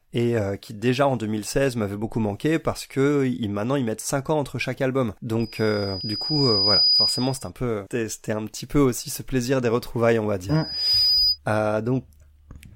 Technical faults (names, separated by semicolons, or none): loudspeaker feedback squeal